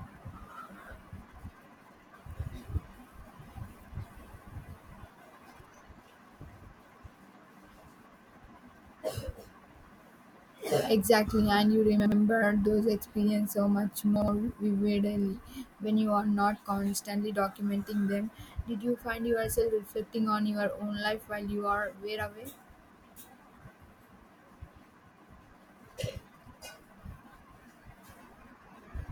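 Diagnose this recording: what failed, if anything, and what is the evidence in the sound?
Chunks out of order at the buffer stage: at 12.0 and 14.16 s a 60 ms block plays one slot late, jumbling the speech. Waveform steps mark the joins.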